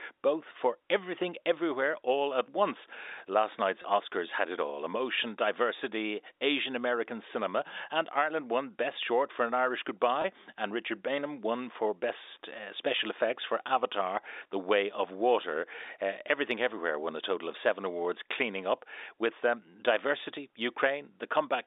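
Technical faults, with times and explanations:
3.82–3.84 s and 10.22–10.24 s, packet loss with pitch repetition: a brief, slightly held buzz as the receiver repeats the last pitch period over a 20 ms gap, consistent with one lost packet each time.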